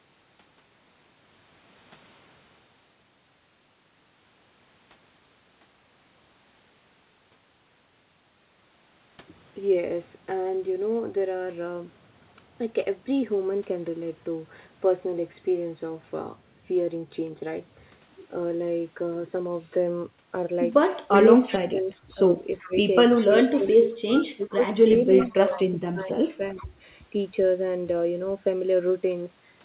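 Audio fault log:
21.08–26.73 s, speech suppressed in double talk: the voice dips by as much as about 20 dB and breaks into pieces over roughly three seconds in total. The likely cause is an echo canceller that, with both sides talking at once, turned down the near talker along with the echo.
21.15–21.59 s, 22.59–25.58 s and 26.58–26.65 s, echo leak: a faint copy of the voice arrives 384 ms late, about 20 dB, 15 dB and 25 dB below the speech. It is likely loudspeaker sound that the far side's echo canceller failed to remove and sent back.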